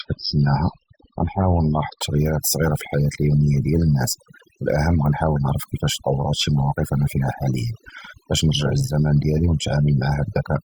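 The player opened on a low-bitrate rendition of an adaptive stream, an adaptive stream starting at a low bitrate, before switching up at 2.0 s. Until then nothing sounds above 5.6 kHz and codec smearing is stronger, which fits a coarse MP3 near 16 kbit/s, then clarity jumps with no gap.

Throughout, overdone noise removal is at work: a noise reducer pushed too hard cuts individual frequency bands whenever they approach its noise estimate, taking quieter parts of the speech too. The background drops and breaks up into twinkling specks.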